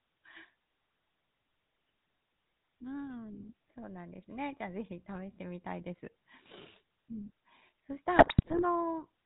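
From the start the speech carries the buzzy, gravelly roughness of the GSM full-rate codec, plainly audible and pointing to the 13 kbps full-rate scheme. The codec reduces the voice to a vocal-tract filter driven by a sparse, regularly spaced pulse train, discarding much of the excitation detail. On a spectrogram, energy stops hard at 4 kHz, and harmonics look smeared and grainy rather than cleanly striated. The waveform shows a coarse, pulse-like texture.

From 8.16 to 8.62 s, GSM bit errors break up the sound for about half a second. Corrupted filter, pitch and gain parameters reach the decoder, so successive frames are rebuilt with the wrong spectral shape or level. The damage fits a few percent of bits flipped across roughly two dozen frames. It comes out as squawks, pops and gargling. A spectrogram shows blocky, frame-length patches of misplaced energy. The waveform shows abrupt jumps in level between frames.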